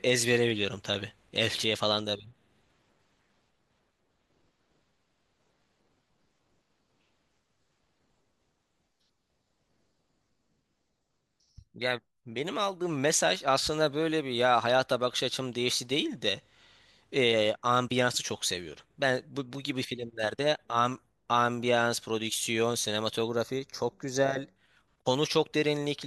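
Near the end, from 23.29 to 24.56 s, there's channel delay with comb filtering: one side runs a fraction of a millisecond late, so summing to mono carves notches starting around 3 kHz. The speech turns hollow and phasey for that stretch.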